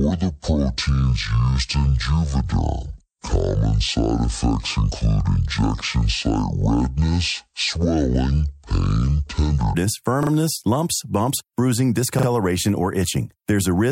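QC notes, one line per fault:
0.00–9.74 s: section at the wrong speed. Speech plays at 0.529 times normal speed, slow and roughly ten semitones deep, likely from playback against the wrong clock.
10.23–10.31 s and 12.19–12.27 s: repeated buffer. A 40 ms piece replays twice in each, giving brief hard-edged stutters, which fits a 40 ms buffer arriving late.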